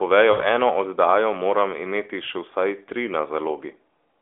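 At 0.32 s the sound loses its frames and holds until about 0.46 s, a fault of lost AMR speech frames. Corrupted radio data failed its checks, so the decoder kept resynthesising from the last good pitch and vocal tract settings while steadily lowering the gain. The sound smears into a drawn-out, fading tone before recovering roughly and slightly weak. The dropout fits four consecutive 20 ms frames. The narrowband AMR band limit, with nothing above 4 kHz, is audible throughout.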